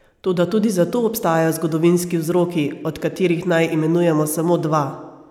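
No technical faults can be heard at any point in this speech recording.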